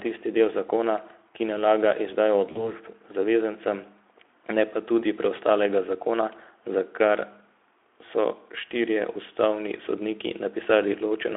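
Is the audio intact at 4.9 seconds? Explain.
Yes, at 4.9 seconds the speech is intact, with nothing there beyond the light coloration of the Speex codec carrying it at 15 kbps within the narrow 300 Hz to 3.5 kHz line band.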